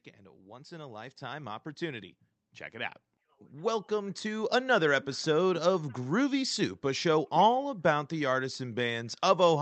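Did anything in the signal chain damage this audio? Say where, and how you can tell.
Yes. Automatic gain rising in call processing: from 0.46 to 2.18 s and 2.71 to 5.04 s, speech and background swell together, about 7 and 8 dB. The AGC ramped up its gain.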